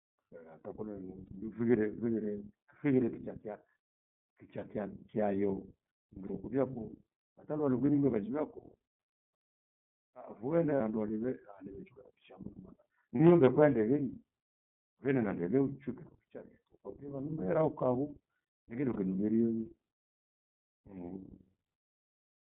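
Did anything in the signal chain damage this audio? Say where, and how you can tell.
Yes, at the codec stage. The whole clip has passed through the iLBC codec. The speech is confined to roughly 150 Hz to 3.6 kHz, with nothing above that, and it has a plainly audible rough, slightly synthetic edge. That texture comes from iLBC rebuilding each 30 ms frame's excitation on its own rather than from the previous frame. The frame length and the grain of the sound fit the 13.33 kbps mode.

There's also network damage in the form of lost iLBC frames. Brief dropouts occur at 1.26–1.30, 6.27–6.31, 7.86–7.89, 10.76–10.81, 13.17–13.20 and 18.93–18.97 s, each one frame of about 30 ms. In each gap the decoder fills in by looping the last pitch cycle with some noise mixed in, so you hear a short held, faintly buzzy vowel. Because iLBC frames are independent, the speech snaps straight back to normal on the next frame.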